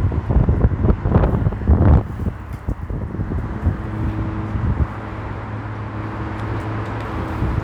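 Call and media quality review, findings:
No audible faults found.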